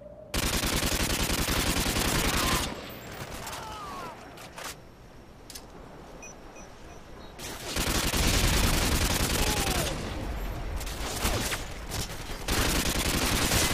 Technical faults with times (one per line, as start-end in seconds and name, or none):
1.75-12.10 clock drift buffer slips